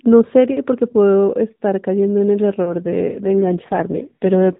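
From 2.67 s to the end, an AMR rate drop makes the speech rougher and more synthetic. The band and continuity hold, consistent with a shift from 12.2 to 5.9 kbps.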